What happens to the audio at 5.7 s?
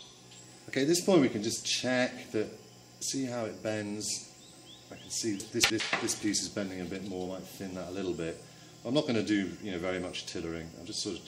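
Chunks out of order, from 5.4 to 5.8 s. One 100 ms chunk plays three chunks late. The jumbled order causes a garbled moment.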